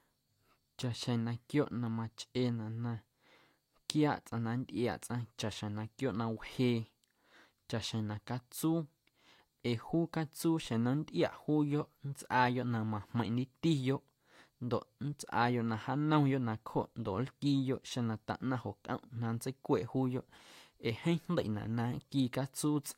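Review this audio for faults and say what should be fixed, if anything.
Nothing needs fixing, as the speech signal shows no technical faults anywhere in the recording.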